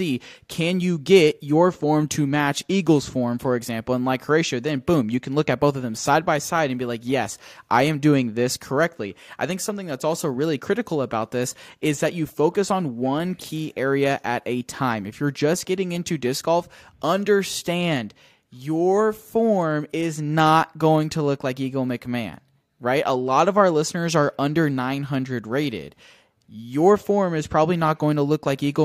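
Listening to this speech recording, nothing stood out as a technical problem at any point.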